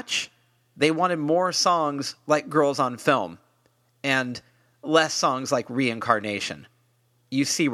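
No technical faults are audible anywhere in this recording.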